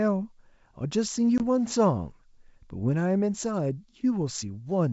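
A speech recording over G.722 wideband coding at 64 kbit/s has a packet loss on the ADPCM call from 1.38 to 1.43 s. A hard-edged silent gap of about 20 ms, consistent with a single dropped packet, is followed by briefly disturbed speech while the decoder's adaptive predictor and step size drift out of step with the sender's before settling.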